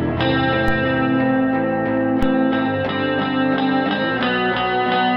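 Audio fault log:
0.68 s and 2.23 s, DC step: each time a single low thump, like a knock under the music, while the music itself continues unchanged. The waveform's zero line suddenly jumps by about -12 dBFS, and that abrupt shift is heard as a brief thud. The offset does not hold: it drains away within a few tens of milliseconds, as a 5 Hz high-pass would pull it back, so each step leaves only the thump.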